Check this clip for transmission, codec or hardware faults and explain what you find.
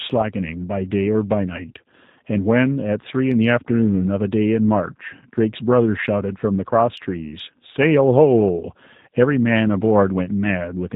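One codec fault runs through the whole clip. The speech has passed through the G.729 codec, heard from start to finish. The sound points to the G.729A variant at 8 kbit/s. This codec does not send the waveform. It sends settings for a vocal tract filter, a pitch predictor and a few pulses per 10 ms frame, then rebuilds the speech from them. Nothing above 4 kHz survives. The damage is plainly audible. The speech sounds muffled, slightly rough and synthetic.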